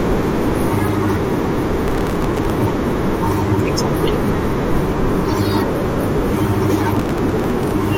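Processor overload crackle hits this speech clip from 1.88 to 2.50 s and again from 6.95 to 7.71 s: the processor repeatedly misses its deadlines for very short buffers, around a millisecond and a half, and replays stale audio each time, producing gritty tearing.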